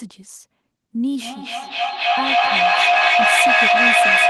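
From 1.16 s to the end of the clip at 4.30 s, a feedback echo between two devices takes over the speech. One device plays the other's microphone signal into the room, that microphone picks it up again, and neither echo canceller removes the other's playback. Each sound returns roughly every 300 ms and climbs to about 11 dB above the speech. On a spectrogram, copies of each speech pattern stack at that spacing, thinning into narrow ringing bands. The waveform envelope swells instead of decaying.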